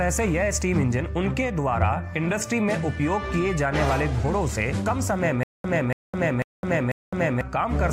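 From 5.43 s to 7.41 s the audio falls into a stutter with silent gaps: a 283 ms burst replays four times, each followed by 211 ms of digital silence, repeating every 494 ms. The waveform shows identical blocks separated by flat lines, and the spectrogram shows matching patches split by empty columns. The likely cause is a stalled player or stream that replays its last fragment on each retry, so the intervening audio is lost.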